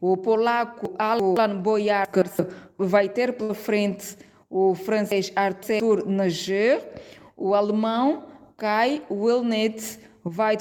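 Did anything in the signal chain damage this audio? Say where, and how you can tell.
Yes. Chunks out of order at 0.85–1.37 s, 2.05–2.39 s and 5.12–5.80 s, a driver or buffer fault. A block of about 171 ms was written late and plays two, one and three blocks behind its proper place, so each spot sounds jumbled around its hard joins.

Burst of packet loss at 3.43–3.52 s, a network fault. For about 56 ms the receiver extends the last sound and lets it fade, then picks up again about 60 ms further on, so that stretch of audio never plays.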